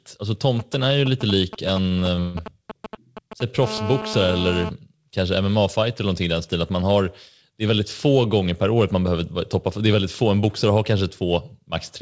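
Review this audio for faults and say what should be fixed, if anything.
GSM signalling bursts run from 0.59 to 3.42 s: a galloping pattern of ticks and short 217 Hz buzzes, roughly 10 dB below the speech. A nearby 2G phone exchanging signalling bursts couples radio energy into the audio circuit, which rectifies it into audible pulses. Keep mobile phones away from microphones, cables and preamps, and use shielded, properly grounded cabling.

Repeated stalls (stutter) occur between 1.88 and 2.36 s. There are four stalls totalling about 226 ms, the longest 148 ms, so nearly half that stretch is concealed. Packets arrived late, the jitter buffer repeatedly ran dry, and the receiver extended the previous sound until data resumed. Nothing is lost, but the speech drags. Fix the network delay variation or allow the jitter buffer a larger target depth.

GSM phone buzz appears from 3.63 to 4.69 s as a hard, raspy 217 Hz buzz with many harmonics, about 9 dB below the speech. 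A 2G phone in an active call transmits 217 bursts per second, and the audio circuit demodulates them into a steady tone unrelated to the signal. Move the phone away from the recording chain and add RF filtering at the inputs.

The G.722 call path, with nothing above 8 kHz, is working as intended and needs no change.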